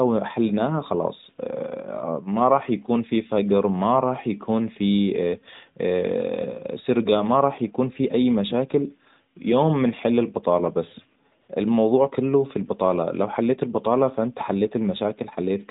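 AMR comfort noise appears from 11.42 to 11.48 s, between "يوم بنحل البطالة بس" and "الموضوع كله في البطالة". The phone treated this 60 ms stretch as silence and sent no speech frames, so the receiver filled it with smooth synthetic noise, briefly replacing the real background of the narrowband call.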